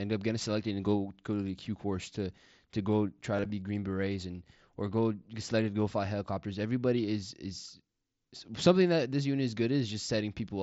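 From 3.36 to 3.50 s the speech turns briefly buzzy and flat, with a slight warble as it recovers. This is concealed Bluetooth headset packet loss: 60 ms went missing in short gaps over 135 ms, longest 22.5 ms, each filled by repeating the best-matching recent waveform.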